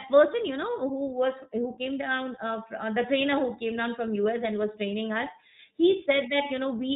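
From start to finish the speech carries iLBC codec damage, and it is plainly audible. Everything above 4 kHz is gone, and the voice takes on a slightly rough, synthetic grain, which fits 20 ms frames at about 15.2 kbps. Each frame's excitation is coded on its own, without leaning on the frame before. Plain telephone band-limiting would dull the top end without adding that grain, and lost packets would leave gaps.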